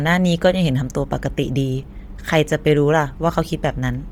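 Throughout the speech, the upper spectrum has a breathy, grainy wash with heavy codec damage, likely Bluetooth LC3 compression, consistent with roughly 32 kbps in 10 ms frames. Unlike plain band-limiting, energy still reaches about 20.2 kHz, but it is substituted noise rather than real detail.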